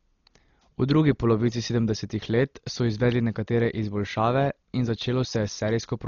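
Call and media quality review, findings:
Likely Dolby Digital compression at a starved bitrate, throughout the speech: band cut off above 6.9 kHz, many frequency lines left without mantissa bits and refilled with dither noise. Heavy damage, dull top end, rough fluttering noise around tones, consistent with roughly 32 kbps.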